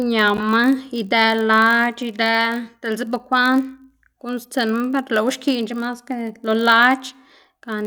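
A block size mismatch (padded) runs throughout the speech. Each block carries a short zero-filled gap, giving a 46.9 Hz buzz, which fits 1024-sample reads. Playback slows only to 0.999 times.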